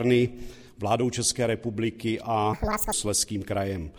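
From 2.53 to 2.93 s the audio is read two samples at a time, running at 2x speed an octave up.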